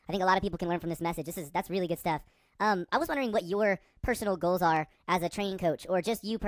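Speech runs throughout at a wrong sample rate: it plays about 1.45 times too fast and about 6.5 semitones high, consistent with audio made near 22 kHz played at 32 kHz. Unlike a pitch shift or time-stretch, tempo, pitch and timbre all rise together.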